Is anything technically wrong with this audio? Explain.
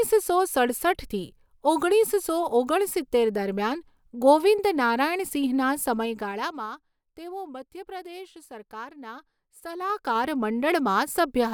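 Yes, there is zipper noise in two places. The gain control jumps in unsmoothed 2 dB steps, about ten per second, instead of gliding. Each jump leaves a small discontinuity in the waveform, heard as a tick. From 5.97 to 6.74 s, just after "દરમિયાન ગોવિંદ નારાયણ સિંહના", the level drops by roughly 15 dB. From 9.73 to 10.33 s, after "તેઓ મધ્ય પ્રદેશ સરકારના", it climbs back by a similar amount. Both moves carry a fast, grainy zipping over the speech.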